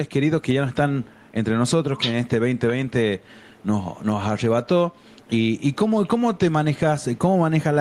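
Gain pumping runs throughout: the gain swells in gaps and ducks by around 10 dB under each loud sound, likely from excessive gain hitting a fast limiter, with a flattened waveform envelope.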